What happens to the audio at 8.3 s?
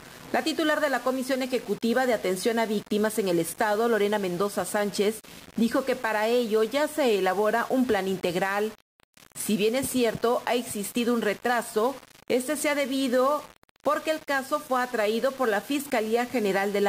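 At 8.3 s the sound is grainy and gritty, as across the whole clip. The likely cause is low bit depth without dither: rounding to about 6 bits leaves error roughly 20 dB below the signal. Unlike dithered hiss, that grit follows the sound itself.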